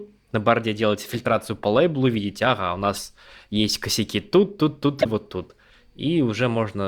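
Corrupt frame decoded at 2.95–2.98 s, after "лейблу видите ага у", and at 4.98–5.06 s, after "есть косяки тут тут". Damaged compressed frames were played anyway. Energy lands at wrong frequencies. Each is a short burst. The second is much louder.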